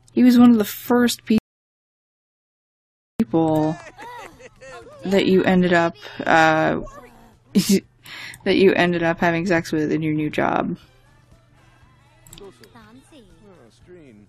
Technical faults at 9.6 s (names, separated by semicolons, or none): none